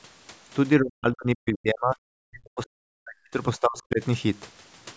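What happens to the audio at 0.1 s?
Nothing goes wrong at 0.1 s: the speech there is intact, carried normally through the call's microphone processing, which trims the lowest bass and leaves nothing above 8 kHz.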